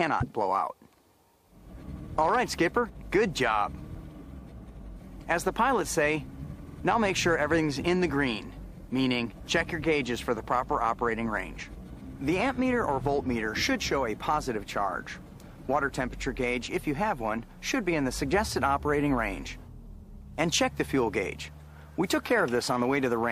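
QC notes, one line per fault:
6.67–6.76 s: repeated frames. One 46.4 ms block, which fits a single compressed frame, plays three times, causing a stutter. The waveform shows identical copied segments, and the audio gains 92.9 ms.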